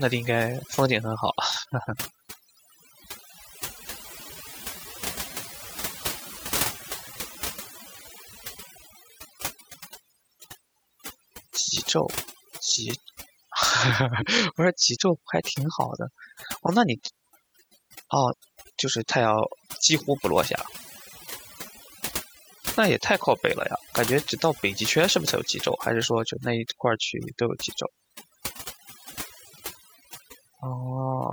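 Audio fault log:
Throughout, overdone noise removal: aggressive noise reduction gates bands near the noise floor, leaving twinkling specks in silence, unlike steady hiss or codec smearing.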